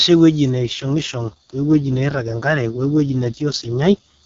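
An AMR rate drop runs from 0.53 s to 4.24 s in this speech clip. Before it, the AMR wideband (HD Voice) codec sounds clean, which fits its top rate of 23.85 kbit/s. After 0.53 s the bandwidth and continuity stay intact, but the voice turns rough, buzzy and synthetic. This points to the network forcing the codec down to roughly 6.6 kbit/s, its lowest mode, and spending the freed bits on error protection for a weak radio link.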